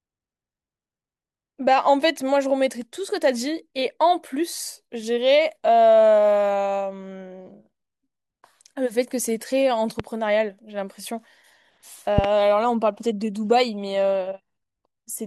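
Speech with two loud pops over it, the speech continuing beneath: a single pop at 10.00 to 10.02 s and a double pop at 12.18 to 12.27 s, each peaking roughly 15 dB above the speech. Each is likely a voltage spike from a plug, switch or static discharge.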